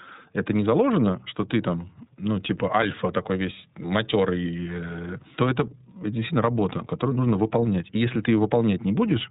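From start to end, the speech carries the sound of the iLBC codec. This narrowband VoIP coder rebuilds the excitation of each 30 ms frame on its own, with nothing carried over from the frame before, and the grain points to its 13.33 kbps mode. The damage is plainly audible: the voice is muffled, slightly rough and synthetic. On a spectrogram, energy ends abruptly at 4 kHz, leaving an empty band above for the whole clip.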